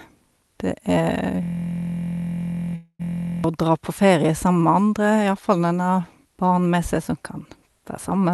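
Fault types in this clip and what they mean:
System hang loop: From 1.43 to 3.44 s, a tiny 23.22 ms slice of audio repeats exactly, over and over, so instead of a stutter you get a steady buzz at about 43.1 Hz. That's what happens when the machine or driver stalls and the sound hardware keeps replaying the same ring buffer. A loop that length fits a 1024-sample buffer, and it runs for about two seconds before things recover.
Call audio freeze: Inside that stretch, from 2.75 to 3.01 s, the sound trails off as a fading buzz into about 50 ms of silence, then picks up right where it stopped. About 239 ms of filler has been inserted, nothing is actually lost, and everything after it sits 239 ms later. The likely cause is delayed packets leaving the jitter buffer empty, with the receiver stretching out the last bit of sound until the packets arrived.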